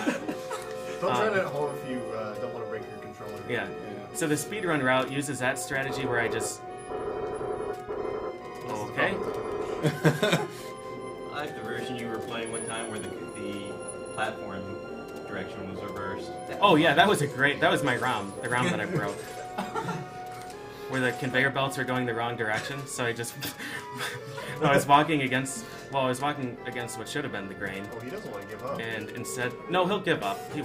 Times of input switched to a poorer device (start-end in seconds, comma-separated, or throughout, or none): none